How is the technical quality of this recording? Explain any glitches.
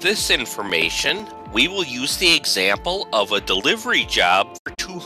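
The recording has two clear glitches: a short patch of crackle near the start and a brief dropout near the end.

From 0.69 to 1.20 s there is processor overload crackle. The processor could not fill its small audio buffers in time. It missed several deadlines in a row, perhaps seven or so. Each miss replayed a scrap of old audio with hard edges. The scraps are tiny, which fits buffers of about 5 ms. Strung together, they make a gritty, tearing crackle over the sound. It stops once the load eases.

From 4.57 to 4.80 s there is a digital broadcast dropout. The receiver lost valid data and muted until good frames returned. The sound fades out over about 20 ms rather than cutting dead. About 96 ms of audio is missing in total, scattered across roughly 192 ms. The pattern fits four lost frames. The longest single hole is 72 ms. The result is a stuttering set of short gaps, and the audio sent during them is gone.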